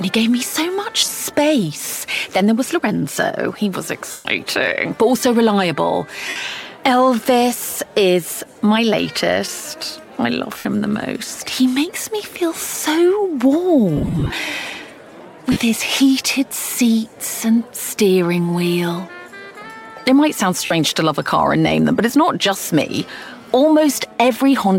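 Short stretches of the sound turn into a hissy, smeared wash at 1.00 to 1.11 s (broken into brief gaps of up to about 20 ms), 4.11 to 4.25 s, 6.29 to 6.36 s, 10.58 to 10.65 s, 13.96 to 14.33 s (again scattered, with runs of up to about 30 ms), 15.52 to 15.57 s and 20.65 to 20.71 s. These are lost LE Audio frames. The missing stretches, 37.5 to 217.5 ms long, fit 7.5 ms LC3 frames. For each one, the decoder replayed the last spectrum with scrambled phase, so tonal detail blurs into noise. In the longer dropout at 4.11 s, the sound can be heard fading as the concealment runs on. The light lossy compression leaves at most a faint trace on noise and sharp onsets.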